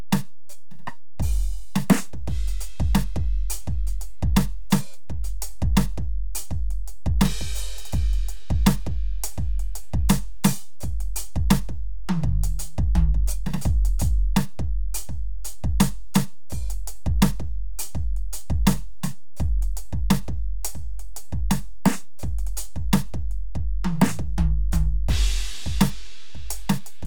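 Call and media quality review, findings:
DC offset throughout the music, about -24 dBFS. Constant shift of the whole waveform off zero. Probable analogue front end or converter bias leaking through. Not audible as such, but eats headroom and shows as steady energy at 0 Hz.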